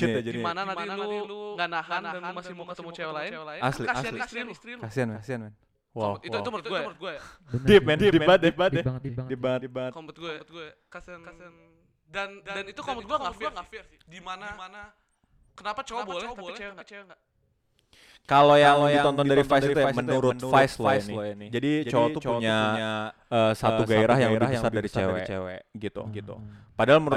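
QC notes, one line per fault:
Throughout, doubled audio track: every syllable of the speech is followed by a second full-band copy roughly a third of a second later and only a few dB quieter. The echo has no decay tail or room colour, so it sounds like a duplicate rather than reflection. The likely cause is the same signal reaching the mix twice, once directly and once through a slower capture path, leaving the two copies offset by a fixed delay.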